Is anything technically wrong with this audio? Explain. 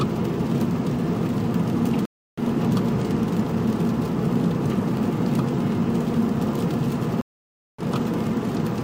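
Yes. There are two stream reconnects, at 2.05–2.39 s and at 7.21–7.83 s. Each time the connection dropped, playback went silent, and the player reconnected and started a fresh decoder partway through the stream. The first gap is 320 ms, and the sound resumes slightly later than where it stopped. The second gap is 570 ms and skips ahead by roughly 0.7 s. In both cases the resumed audio fades in over its first frame.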